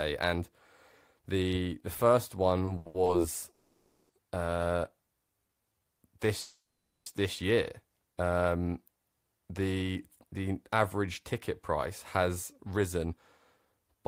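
Repeated stalls (stutter) from 2.65 to 3.08 s, right after "the the first": packets arrived late, the jitter buffer emptied four times, and about 190 ms of continued sound was inserted, with the longest gap 80 ms, so the speech drags haltingly.

A call audio freeze from 3.52 to 4.11 s and another from 6.41 to 7.08 s hold the last sound as a fading buzz for 570 ms and 650 ms with no silence, likely because packets were held up and the jitter buffer ran empty.

A jitter buffer slow-down from 5.42 to 5.86 s repeats pitch periods to rebuild reserve, adding 77 ms and playing at 84% speed with unchanged pitch, so the sounds are drawn out.

A jitter buffer speed-up occurs from 9.82 to 10.34 s, just before "average ticket price has", then from 12.53 to 13.13 s, after "average ticket price has", and again from 13.65 to 13.96 s. Short pitch-period pieces are cut to shrink excess delay, removing roughly 70, 70 and 50 ms. 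The speech sounds hurried at 110%, 112% and 115% speed with the same pitch.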